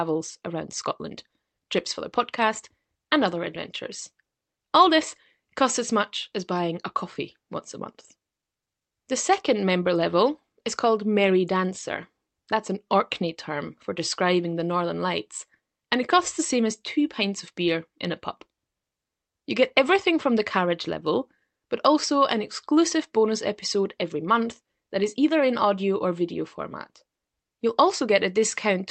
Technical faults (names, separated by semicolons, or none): none